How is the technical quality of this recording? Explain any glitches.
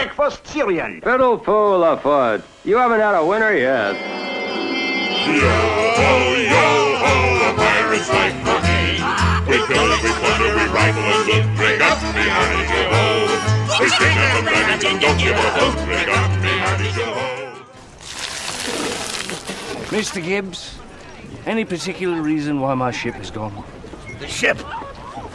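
No technical glitches can be heard in the recording. There is nothing in the audio that calls for an explanation.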